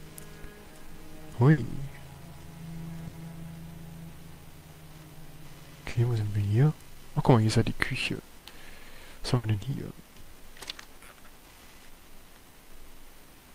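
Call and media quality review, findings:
Burst of packet loss, 1.51–1.60 s, 3.07–3.16 s, 5.89–5.98 s, 9.37–9.46 s. Four similar dropouts, each about 90 ms wide. Receiver-side concealment stretches the last received sound for about 60 ms and fades it out. Playback then resumes with about 60 ms of audio skipped, which points to consecutive lost or late packets in the transport path.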